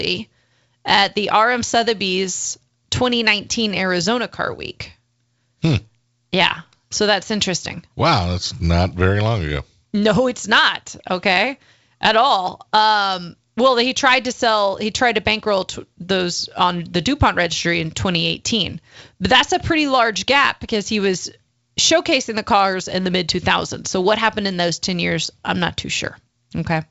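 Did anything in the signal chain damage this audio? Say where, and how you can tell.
No: the speech went through G.722 wideband telephone coding, whose faint upper-band hiss fits the full 64 kbit/s mode, and the absence of content above about 7.7 kHz is that codec's normal ceiling, not harm from any stage in the chain.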